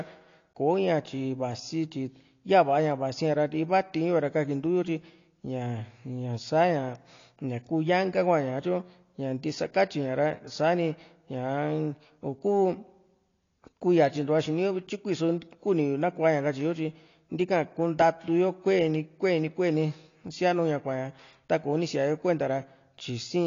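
Speech, and for the whole clip it's dull and smeared, with nothing above 7.1 kHz. That's likely AAC compression at a low bitrate, roughly 32 kbps.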